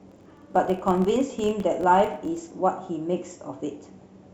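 Until 2.54 s, the filter restarted on every block, losing its state; each block's opening tick forms a level-following 43.1 Hz buzz, fitting 1024-sample blocks.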